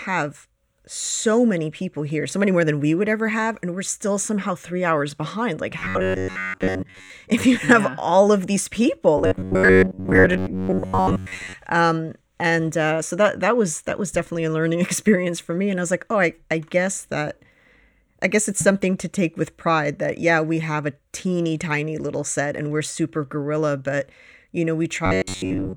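Speech that turns into a rigid, metallic buzz pitched near 93.8 Hz from 5.79 to 7.10 s, 9.18 to 11.54 s and 25.06 to 25.76 s, still roughly tracking the words. This is robotic sound from repeated short buffers, likely from audio arriving too late, so a slice of about 10.7 ms is looped to fill the gaps while roughly two thirds of the real signal is skipped.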